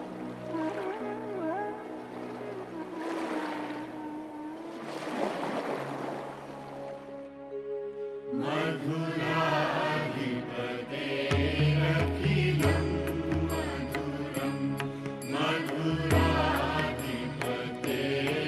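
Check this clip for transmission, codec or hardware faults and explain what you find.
Nothing in the clip points to a transmission, codec or hardware fault.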